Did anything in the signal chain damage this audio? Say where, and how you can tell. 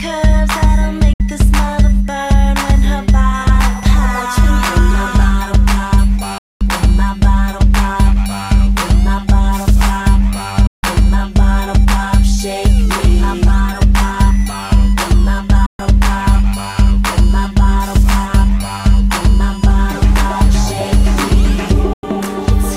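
Yes: a digital broadcast dropout at reception, with abrupt mutes using 3 ms fades at 1.13, 6.38, 10.67, 15.66 and 21.93 s, lasting 64 to 224 ms in steps that fit 32 ms frames. These are clean silences, not concealment.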